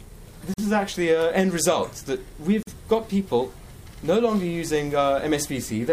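Twice the sound drops out abruptly, for about 45 ms, at 0.54 to 0.58 s and 2.63 to 2.67 s, then resumes where it stopped. Each is a gap at a join of encoded pieces: separately encoded pieces keep their start delay and end padding.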